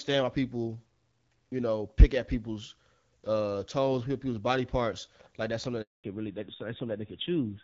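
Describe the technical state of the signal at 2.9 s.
At 2.9 s the speech is intact, with no fault, and the AMR wideband (HD Voice) coding at 12.65 kbit/s, a rate where this codec stays clear, leaves only light codec damage.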